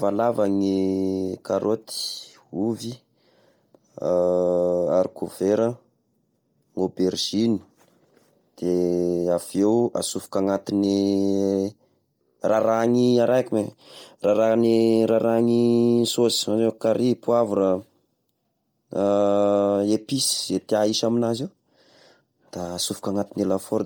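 All the way through, the speech has a breathy, grainy edge, with the top end replaced by hiss-like noise fill. That's likely Bluetooth LC3 compression working hard, consistent with about 32 kbps and 10 ms frames. The content stops around 20.2 kHz.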